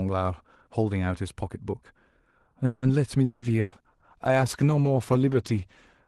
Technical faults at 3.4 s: long network dropout; call bitrate drop

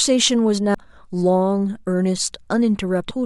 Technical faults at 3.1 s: damaged data in a compressed stream

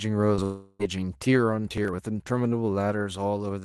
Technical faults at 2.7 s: none

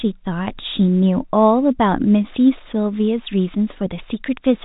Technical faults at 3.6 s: none

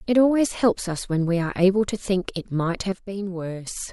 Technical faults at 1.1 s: none

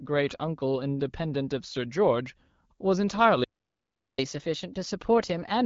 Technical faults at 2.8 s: none

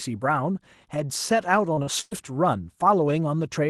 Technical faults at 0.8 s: none

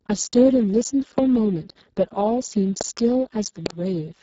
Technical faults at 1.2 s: Speex codec; loud pop

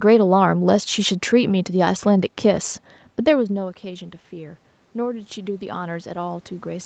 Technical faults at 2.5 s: none

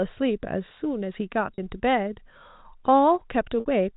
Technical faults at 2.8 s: none

